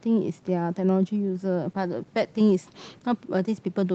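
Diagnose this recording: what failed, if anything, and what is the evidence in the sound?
Call bitrate drop in the codec stage: from 1.69 to 3.33 s speech turns rough and watery, fitting an Opus rate near 13 kbps. It is continuous, without packet-loss gaps.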